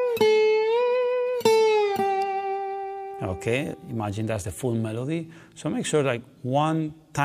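At 2.22 s a single sharp snap cuts through the audio, lasting only a couple of milliseconds and peaking at about -25 dBFS, well short of clipping. Its abrupt onset and broadband character mark it as an electrical switching spike, likely from a nearby switch, relay or static discharge arcing briefly and coupling into the audio line, which adds the transient on top of the sound.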